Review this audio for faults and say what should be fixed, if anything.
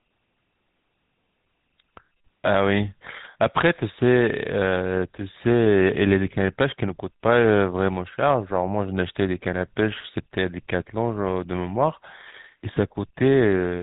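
The speech went through the GSM full-rate codec for the whole clip. It models the vocal tract and drives it with sparse regular pulses, which fits a 13 kbps full-rate stream. Nothing above 3.8 kHz survives, and the voice comes out buzzy and gravelly. To prevent it, carry the audio over a wideband codec or capture it before the GSM leg.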